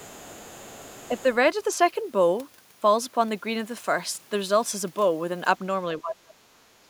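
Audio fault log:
0.00–1.33 s, other side's voice leaking through: A second, much fainter voice sits underneath the talker in the opening second or so, well down in level, perhaps 25 dB below the main speech. It is likely that the far end's audio is coming out of the talker's loudspeaker, being picked up again by the microphone, and not being fully removed by the echo canceller, so a residue of it is sent back.
5.98–6.88 s, speech suppressed in double talk: Near the end, the talker's voice dips. At its worst it falls by around 30 dB, and the disturbance covers most of that last stretch of just under a second. This is likely the echo canceller meeting both sides speaking at once, failing to tell the local voice from the loudspeaker echo, and attenuating everything together.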